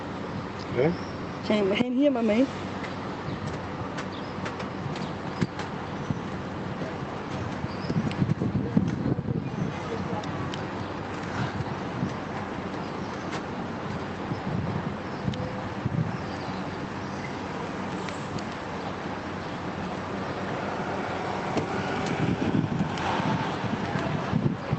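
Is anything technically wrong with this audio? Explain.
No, nothing here sounds wrong; it comes across as ordinary audio carried over a WebRTC call path using Opus at 32 kbps, with the top end stopping around 8 kHz as you'd expect from that kind of link.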